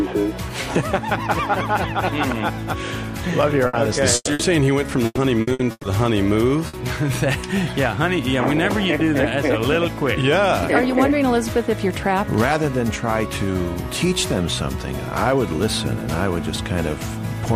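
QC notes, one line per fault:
3.67–3.76 s, 4.15–4.30 s, 4.33–4.42 s and 6.67–6.76 s, burst of packet loss: packets went missing or arrived too late, so the receiver stretched the last sound and faded it to bridge each gap, then resumed further on. About 60 ms of audio is lost in each burst except the one at 4.15 s, where 120 ms is lost and the patch ends in a 30 ms silence.
5.05–5.86 s, repeated packet loss (robotic sound): packets failed to arrive four times in quick succession, each hole patched by continuing the previous sound. Together the patches cover 360 ms, about 44 percent of the stretch, with the longest at 120 ms, so the sound turns choppy with pieces missing.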